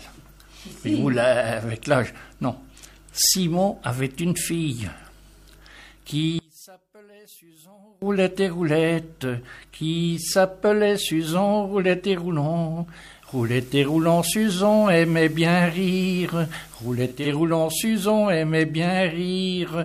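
From 6.39 to 8.02 s, one channel inverted is the likely cause: summed to mono, the shared content cancels and the sound drops by about 29 dB, leaving only a faint residue. From 13.11 to 17.34 s, the receiver is digital radio blending to analogue, cross-fading over 324 ms to FM. Hiss rises to roughly 30 dB below the signal, and the level climbs about 2 dB.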